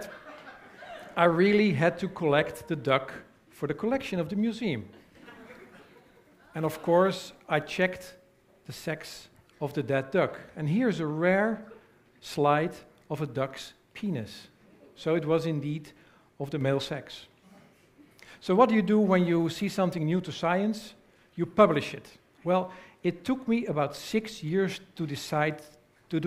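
A sudden gain jump occurs from 16.61 to 16.85 s, where the level abruptly rises by about 4 dB and then drops back, with the sound and its background noise shifting together. This is likely a gain setting applied instantly, without any ramp.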